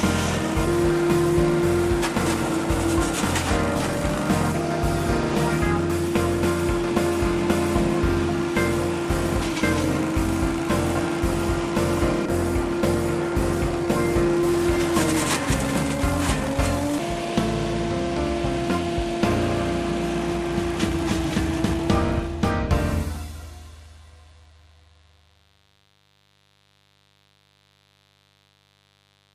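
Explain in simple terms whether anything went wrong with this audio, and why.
A mains buzz runs through the whole recording, from the first second to the last. It sits quietly underneath the main sound as a steady, raspy drone. The cause is electrical interference from the power supply. Something like a light dimmer, a rectifier or a cable without proper shielding lets sharp spikes into the audio twice in every cycle of the 50 Hz mains. That creates a stack of tones from 50 Hz up into several kHz.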